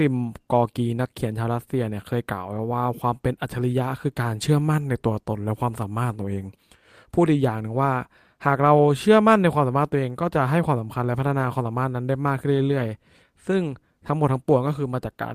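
Around 2.53 to 2.59 s, two separate packets went missing in transit, and the decoder filled the hole with the low-bitrate backup copies carried in the following packets. This is a lost packet rebuilt from error correction. About 40 ms of audio was reconstructed this way, which fits two lost 20 ms packets. The speech never drops out, but that brief stretch turns rougher and grainier, with a noisy, degraded texture.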